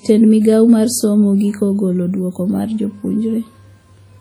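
WMA compression runs throughout the speech, from start to finish. The damage is heavy: transients smear into a ringing, washy haze, and a hiss swells and fades with each syllable. This is likely a transform codec running long blocks, which spreads quantisation noise over tens of milliseconds and zeroes the weaker spectral lines. The result fits early WMA at around 32 kbps, even though content still reaches about 20.1 kHz.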